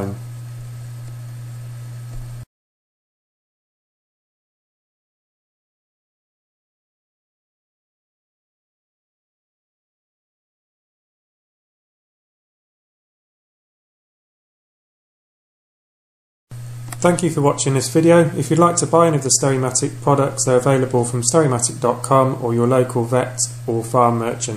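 Nothing stood out as a technical problem on listening to this recording.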